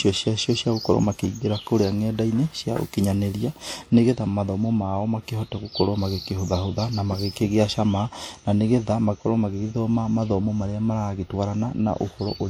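Across the whole of this speech recording, two different kinds of coding artefacts are layered: a swirly, metallic smearing sits on top of a separate grainy roughness, and the high end has a synthetic sheen before it stops at 20.3 kHz. The likely cause is transcoding between lossy codecs. The character points to an older WMA-style encode at a moderate bitrate re-encoded as HE-AAC, with the second codec spending bits reproducing the first one's damage while adding its own.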